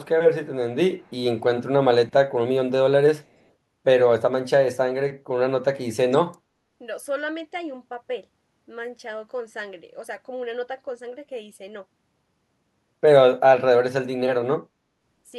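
A speech clip with a brief echo leak from 0.98 to 1.11 s, where a very faint, delayed copy of the voice trails about 218 ms behind. This is likely a far-end loudspeaker's sound reaching its microphone and slipping past an incomplete echo canceller.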